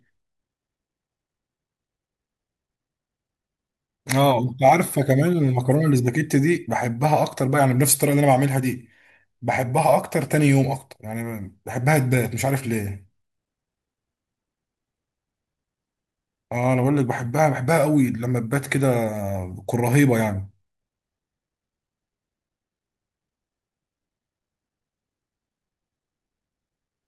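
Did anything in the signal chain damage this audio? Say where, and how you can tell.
Yes. Hard clipping at the converter, 4.65 to 4.72 s. Peaks overshoot by about 2 dB and are cut flat, adding a brief crackle.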